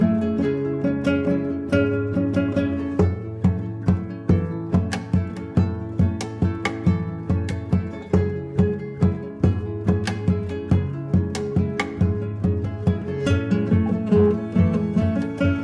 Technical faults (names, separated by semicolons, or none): none